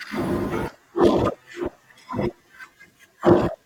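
Compressed frames skipped at 2.62 s: the speech lurches forward, dropping about a third of a second in a single step. A run of roughly ten compressed frames never reached the output, either absent from the stream or rejected by the decoder as corrupt. The jump fits a frame length of about 21.3 ms.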